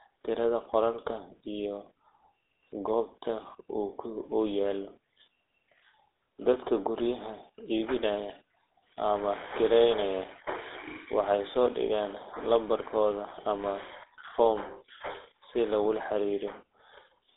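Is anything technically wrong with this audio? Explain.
Yes. Throughout, the speech went through a GSM full-rate codec, which rebuilds the voice from a vocal-tract model driven by coarse, regularly spaced pulses, consistent with a 13 kbps stream. It sounds plainly buzzy and gravelly, confined to a 300 Hz to 3.6 kHz telephone band, with nothing above 3.8 kHz.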